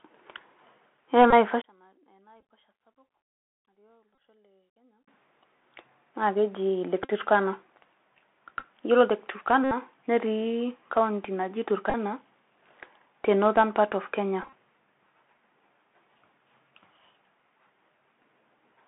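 The whole clip runs through the Bluetooth CVSD headset codec. Everything sits between roughly 150 Hz and 3.7 kHz, the s sounds come out scratchy, and there's a grainy hiss underneath.

The first Bluetooth headset packet repeat hits at 1.31 to 1.33 s. Lost packets get replayed, so you hear a short ticky buzz.

From 1.62 to 5.08 s the level drops by about 34 dB and only a faint leftover remains. That's likely one channel inverted, with the centre cancelling in the mono sum.

More packet repeats land at 2.40, 4.15, 7.03 to 7.12, 8.60 to 8.64, 9.64 to 9.72, 11.90 to 11.95 and 14.43 to 14.53 s. The longer ones turn into a steady buzz near 267 Hz.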